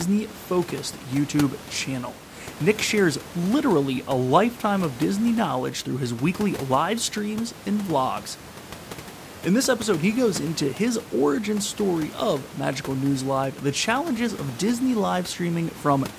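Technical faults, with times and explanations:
No technical faults can be heard in this speech clip. Room noise sits in the background about 19 dB below the speech, and it belongs to the recording space rather than the system.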